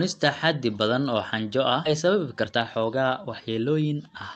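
A speech clip that went through an Opus call path, whose band limit near 8 kHz is present throughout. At about 1.85 to 1.87 s, right after "badan oo xanjo ah", a skip ahead occurs: around a second of audio was discarded while later audio was already queued, so playback jumps straight across the missing stretch with no gap or fill. From 2.01 s to the end, a jitter buffer speed-up trims pitch-period-sized slices to cut the backlog, removing about 0.4 s; the speech plays about 18% faster at unchanged pitch and sounds hurried.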